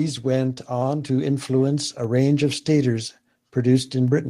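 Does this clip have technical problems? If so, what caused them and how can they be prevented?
Yes. At 1.02 s, between "went on" and "to influence a range", the microphone volume stepped up. Speech and background jump together by about 3 dB. Call software raised the input gain. Disable automatic microphone adjustment and set a fixed input level.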